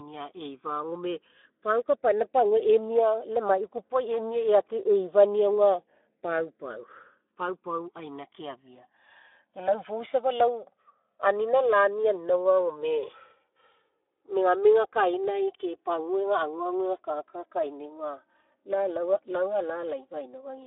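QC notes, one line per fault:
throughout, channels drifting apart: the two sides run on slightly mismatched clocks, so the gap creeps to around 4 ms, and in mono the comb notches sweep as slow flanging.
throughout, Speex codec: clearly audible hoarse, noisy coding on the speech, which fits a low-bitrate setting of around 11 kbps, squeezed into a 300 Hz to 3.5 kHz phone band with nothing above 3.8 kHz.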